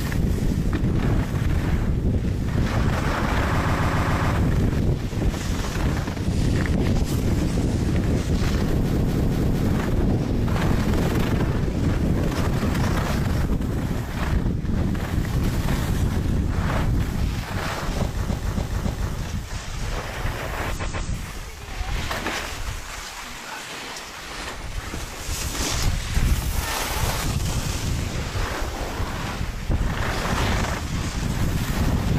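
Repeated frames stutter at 3.58, 8.92, 18.25 and 20.76 s: short blocks, around 140 to 280 ms, replay two to five extra times, as if compressed frames were sent more than once.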